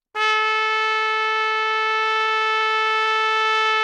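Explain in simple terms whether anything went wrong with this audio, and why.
From about 1.55 to 3.09 s the sound catches and stutters, with many tiny hitches, none longer than about 14 ms. These are repeated stalls (stutter): the audio arrived late, so the player kept stretching the last bit of sound, about a fifth of that stretch, until more came.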